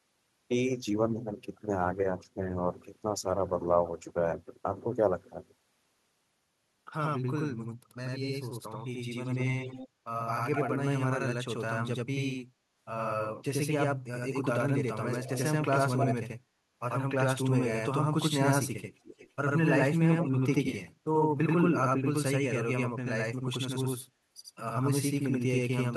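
From start to finish, the speech is doubled. This is a channel delay. One channel runs late by 85.33 ms, and the two channels have been summed to mono. The late copy lands at the same level as the original, so every syllable gets a slap echo just behind it. The speech sounds smeared and doubled. A lag of that size fits a 4096-sample buffer.

Over that doubling, short bursts of echo leak appear. The first runs from 9.25 to 9.88 s, with a copy trailing 199 ms behind. The next runs from 10.27 to 10.77 s, also at 199 ms. The third runs from 14.95 to 15.46 s, at 263 ms. The last two fall from 19.04 to 19.3 s and from 20.22 to 20.31 s, both at 339 ms. Each copy sits roughly 10 to 20 dB below the speech. The likely cause is an echo canceller on a loudspeaker end failing to remove all of what its microphone picked up.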